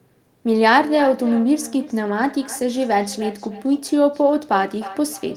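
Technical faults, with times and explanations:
0.57–5.37 s, feedback echo between two devices: a second device on the same call replays this microphone's signal into the room, where it is picked up again beyond the reach of either echo canceller, so the speech returns roughly every 300 ms, peaking about 15 dB below the direct sound.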